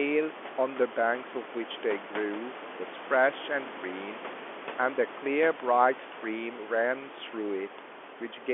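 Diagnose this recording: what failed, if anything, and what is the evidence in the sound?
Nothing failed in this recording, and the sound gives no evidence of any fault.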